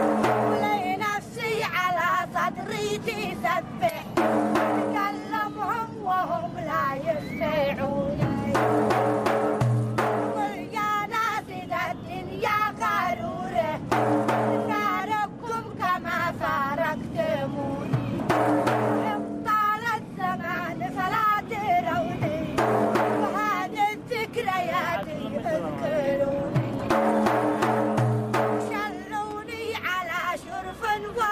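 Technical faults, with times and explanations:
25.03 s and 29.31 s, electrical switching spike: two isolated sharp snaps sit on top of the sound without interrupting it, most likely arcs from a nearby switch or motor coupling into the line. Unlike dropout clicks, nothing is removed or repeated; the underlying audio continues intact beneath each snap.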